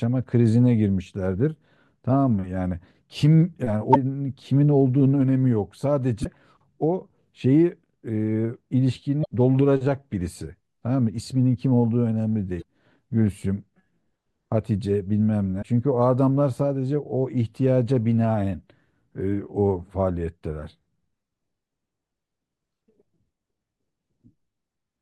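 Damaged data in a compressed stream appears five times in the speech, at 3.91–3.97 s, 6.21–6.26 s, 9.21–9.26 s, 12.58–12.63 s and 15.58–15.64 s, each lasting between 45 and 58 ms. At each point the decoder met corrupted bytes in the encoded frames, misread or rejected them, and lost sync until it found the next valid frame header. Each event is a brief disruption that breaks the flow of the speech.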